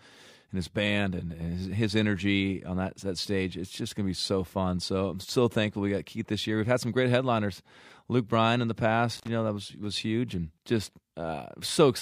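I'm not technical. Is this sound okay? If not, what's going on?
No. Around 9.17 to 9.28 seconds, an intermittent contact, a loose cable or plug, briefly opens, cutting the sound for about 55 milliseconds with a crackle.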